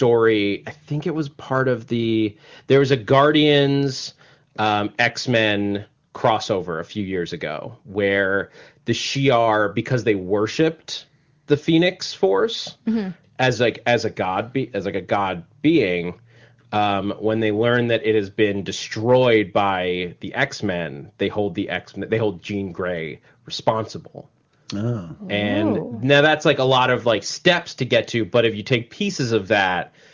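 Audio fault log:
No faults logged: the speech carries the expected call-microphone band limit, with nothing above about 8 kHz, and the AMR wideband (HD Voice) coding of a high-rate mode.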